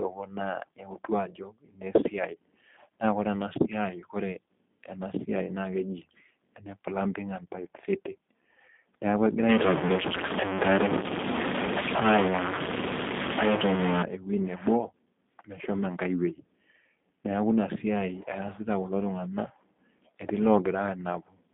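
Speech that's been through a G.729 codec the whole way, at 8 kbit/s. It's squeezed into a 200 Hz to 3.6 kHz phone band, with nothing above 3.7 kHz, and the rough, synthetic codec texture is plainly audible. From 9.49 to 14.03 s it turns distorted, with hiss creeping into the gaps, most likely a stuck bit in the data path.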